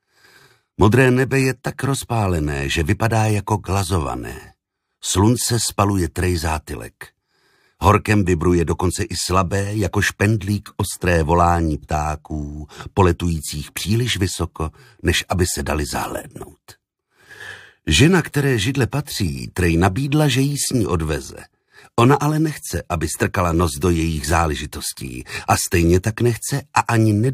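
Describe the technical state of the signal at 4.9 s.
At 4.9 s the signal is intact, with no dropout, distortion, glitch or other fault to be heard at that moment.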